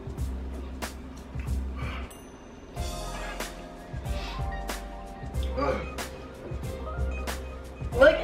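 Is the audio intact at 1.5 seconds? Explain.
No. At 1.5 s the audio falls within a stretch of crude rate conversion from 0.0 to 1.96 s, consistent with 44.1 kHz audio brought to 48 kHz by repeating nearest samples without filtering. That adds a gritty, inharmonic fizz around 30 dB below the sound, visible as faint stray lines on a spectrogram and tiny stair-steps in the waveform.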